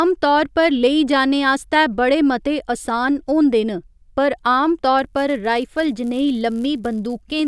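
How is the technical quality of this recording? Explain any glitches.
The recording has one technical fault, a buzz that sets in during the final stretch of the speech.

Resampler restarted on every block, 4.99 s to the end: 10 ms blocks converted separately from 48 kHz to 24 kHz leave edge errors, heard as a 100 Hz buzz under the speech.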